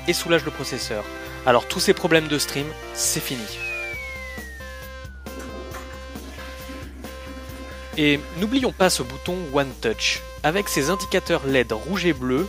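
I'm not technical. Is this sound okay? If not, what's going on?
Yes, nothing wrong can be heard anywhere in this recording, so there is nothing to fix.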